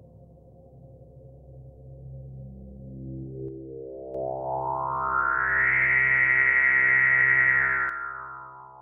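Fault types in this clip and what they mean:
One channel drops out: the sound falls abruptly by about 6 dB at 3.48–4.15 s and again from 7.89 s to the end, likely from losing one stereo side.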